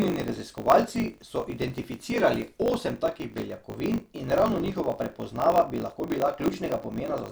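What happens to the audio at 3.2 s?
At 3.2 s the speech is affected by a block size mismatch (truncated), which runs through the whole clip rather than starting there. One stage hands over longer blocks than the next one takes, and the tail of every block is discarded. The result is a steady 50 Hz buzz at the block rate, plus delivery about 1.07 times too fast with the timbre kept. The figures fit 1024-sample writes being read short.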